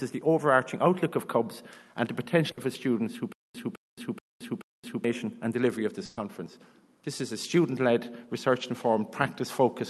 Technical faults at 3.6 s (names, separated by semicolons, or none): stutter with silent gaps